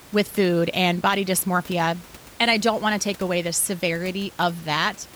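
Nothing is technically wrong with this speech recording; the only background is the room's own noise, sitting about 23 dB below the speech.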